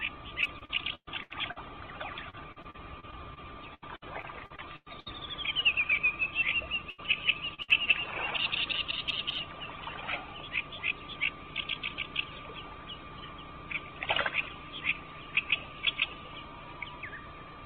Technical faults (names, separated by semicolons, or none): repeated packet loss (robotic sound); burst of packet loss; short concealed packet loss